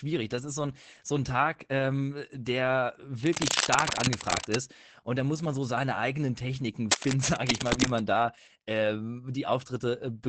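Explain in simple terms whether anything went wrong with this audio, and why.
Opus voice compression affects the whole recording, from start to finish. To make the file small, the speech was squeezed through Opus in its voice mode, which rebuilds the voice from a simplified model instead of keeping every detail. It drops everything above about 8 kHz and describes the rest roughly, in short 20 ms slices. The result is speech that sounds muffled, slightly hoarse and a little robotic throughout.

Cable scratch noise appears twice, from 3.26 to 4.61 s and again from 6.91 to 8.00 s. During those stretches a harsh, uneven scratching or rustling sits over the speech, about as loud as the voice itself. The likely cause is a worn cable or loose connector being moved. Its electrical contact flickers rapidly, and each flicker injects a burst of crackly noise into the signal.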